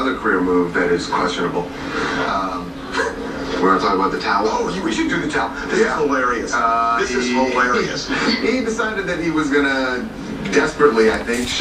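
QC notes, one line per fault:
No faults found. Nothing in this audio calls for a QC entry.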